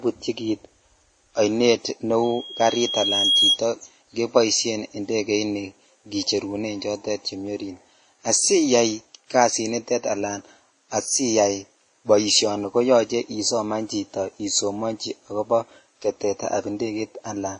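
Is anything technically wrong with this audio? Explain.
Yes, there are two faults.

From 2.23 to 3.60 s there is a loudspeaker feedback squeal. A microphone is picking up its own loudspeaker. At 3.3 kHz the loop gain passes one, so that tone feeds itself. It swells over about a second to a little above the speech. It cuts off just before "keboisien indegeni".

Throughout the clip, nothing is heard above 10.6 kHz. The speech carries artefacts of more than one kind. The likely cause is transcoding between lossy codecs, perhaps a low-rate WMA encode later re-encoded as Vorbis. Each stage added its own damage.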